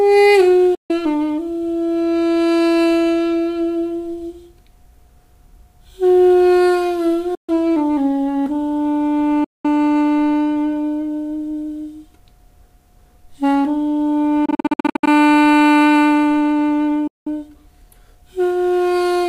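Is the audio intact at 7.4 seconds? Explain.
No: in a Bluetooth dropout, likely late packets discarded, the sound goes silent from 7.35 to 7.49 s, resuming further on as though it had played through.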